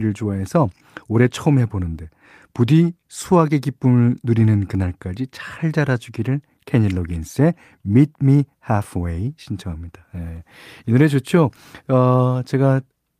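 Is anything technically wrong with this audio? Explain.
No, nothing technically wrong can be heard here.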